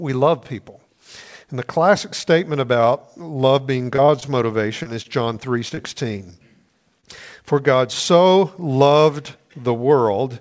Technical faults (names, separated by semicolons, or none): repeated packet loss (robotic sound); short concealed packet loss; short stall from a late packet